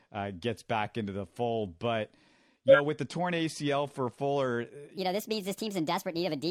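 At 2.65 s, just into 2.75 s, there are compressed frames skipped. Roughly 50 ms of the speech is missing because whole frames never got decoded, so the audio jumps ahead.

From 4.97 s to the end, the section is at the wrong speed. It plays back 1.38 times too fast, so pitch climbs by about five semitones and the speech sounds hurried and squeaky. That's likely from the section being fitted to the wrong clock somewhere during editing or playback.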